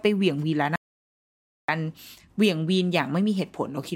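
Speech, with an audio dropout to silence from 0.76 s to 1.69 s. The signal stops mid-flow and leaves about 0.93 s of silence with no room tone underneath, then resumes just as abruptly. Whatever was spoken in that stretch is gone. The likely cause is a momentary loss of the input, such as a device disconnect, a broken link or an accidental mute, while recording continued and wrote silence in its place.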